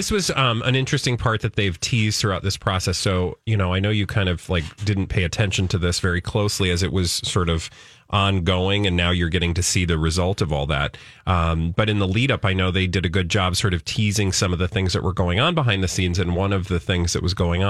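No technical faults are audible anywhere in the recording.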